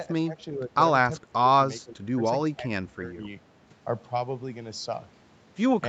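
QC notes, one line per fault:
0.10–0.77 s, 1.18–1.57 s, 1.84–2.24 s, 2.57–2.64 s, 2.80–3.18 s, speech suppressed in double talk: the level repeatedly dips by up to about 20 dB (only about 5 dB at 2.57 s). This is likely an echo canceller mistaking the near-end talker for loudspeaker echo while both sides spoke, and attenuating it.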